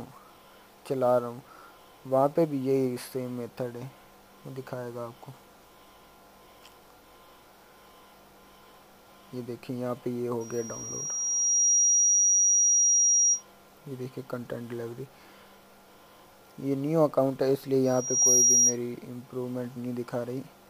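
A microphone-to-loudspeaker loop exceeding unity gain causes loudspeaker feedback squeal: a 5.7 kHz tone swells over the audio from 10.40 to 13.43 s and again from 17.85 to 18.77 s.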